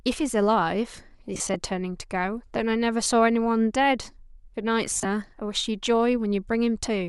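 A speech recording with lost LE Audio frames in three places: from 1.35 to 1.55 s, about 80 ms of audio goes missing in bursts scattered over 200 ms, with the longest run roughly 30 ms; at 3.04 to 3.06 s, a 20 ms dropout; and from 4.91 to 5.05 s, about 100 ms lost across 140 ms. The LC3 decoder covered each gap by repeating the previous spectrum with scrambled phase, so on a spectrogram the voice's harmonic lines smear into noisy vertical bands, while the waveform shows rough, fuzzy patches.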